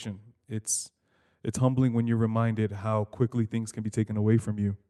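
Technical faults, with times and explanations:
No technical faults can be heard in this speech recording. The audio has passed through a WebRTC call path using the Opus codec, and its top end stops at about 12 kHz, which matches the bandwidth that codec setting allows.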